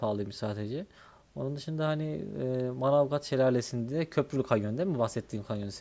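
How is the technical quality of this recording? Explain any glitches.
The technical quality of this recording is sound, with no glitches to explain.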